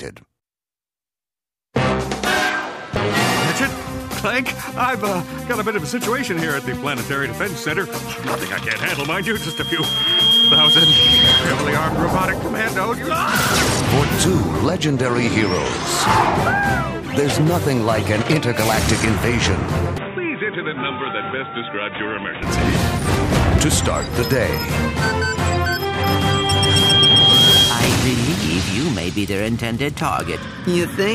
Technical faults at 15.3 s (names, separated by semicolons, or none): none